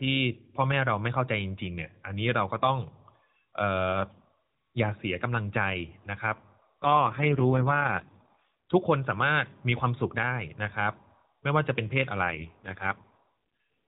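From 6.84 to 8.48 s and again from 12.24 to 13.28 s, AMR rate drops make the speech buzzier and more synthetic, suggesting a fall from 12.2 to 4.75 kbps. The spectrogram still cuts off at 4 kHz, with smeared, coarser harmonics and no gap in the waveform.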